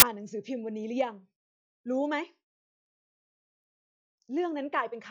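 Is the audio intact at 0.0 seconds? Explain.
No. From 0.00 to 0.02 s the speech is preceded by file tags played as audio. An embedded cover picture is read out as samples. Its compressed bytes look random, so they play as a burst of very loud white noise with hard edges.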